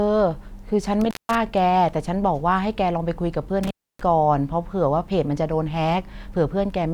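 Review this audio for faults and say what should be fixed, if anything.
The speech drops out twice with a crackle at each edge: at 1.01 to 1.35 s, going silent for about 0.18 s, and at 3.63 to 4.01 s for about 0.29 s, with faint hiss in the gaps. This is intermittent contact, a loose cable or plug briefly breaking the signal path. Reseat or replace the suspect cable and connectors, and secure them against movement before recording.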